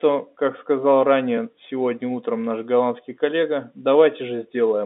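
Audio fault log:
No fault found for this audio fault log.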